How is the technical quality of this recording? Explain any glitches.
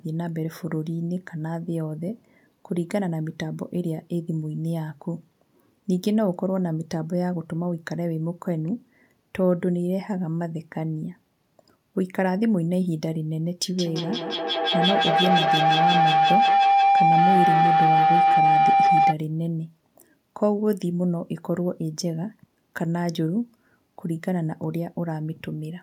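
The recording has one glitch: a feedback howl from 13.7 to 19.2 s. The sound from a loudspeaker is being picked up by a microphone in the same room and sent back out louder each time, so the loop keeps reinforcing itself. It narrows to a ringing tone near 700 Hz, with repeats roughly every 150 ms, the loop's round-trip delay, and peaks about 6 dB above the speech. Unlike an echo, whose repeats fade away, these repeats grow, and the howl stops only when the loop is broken.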